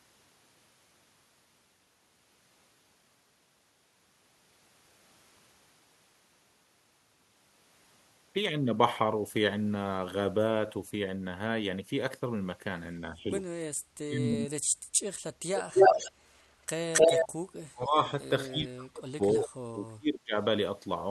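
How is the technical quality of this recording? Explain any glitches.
The recording has two kinds of call-processing glitches in its second half: stretches where the talker drops out, and a delayed repeat of the speech.

Speech suppressed in double talk occurs at 13.01–13.3, 13.89–14.16, 14.39–14.67, 17.57–17.98 and 18.48–20.35 s. The first dip is slight, only about 5 dB. The others gouge about 30 to 40 dB out of the speech, so it nearly vanishes in pieces, and the last one lasts well over a second. The likely cause is an echo canceller that heard both ends talking at once and, unable to separate the local talker from loudspeaker echo, turned everything down.

Echo leak appears at 15.56–16.12, 16.93–17.28 and 19.41–19.47 s as a second copy of the speech arriving 270 ms late. In the first two spots it is strong, comparable to or louder than the speech. The brief third one is much fainter. 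This is likely a loudspeaker at the far end whose echo canceller failed to remove what its microphone picked up, so the sound was sent back down the line.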